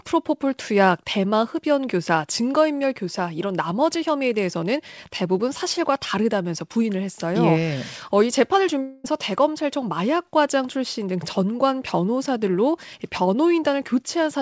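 At 8.82 s the sound breaks off and for about 0.22 s, until 9.06 s, a fading buzzy continuation of the last sound fills the gap. This is a long network dropout, likely caused by audio that never arrived. The receiver's concealment stretched what it had. Unlike a brief packet loss, the stretch runs long enough to smear audibly, yet it never falls to true silence. When the sound resumes, the missing portion is simply gone, heard through a G.722 band that stops at 8 kHz.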